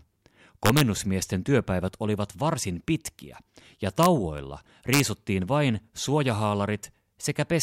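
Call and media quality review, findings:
Violent cracks on loud speech peaks at 0.66–0.81 s, 4.03–4.06 s (after "varsin pitkiä ja") and 4.93–5.00 s. Integer overflow in the gain or mixing stage: peaks about 0–3 dB over the limit wrap to opposite sign.

Single sharp snap at 4.38 s, shortly after "varsin pitkiä ja". Electrical switching spike, likely a nearby switch or static discharge arcing and coupling into the audio line.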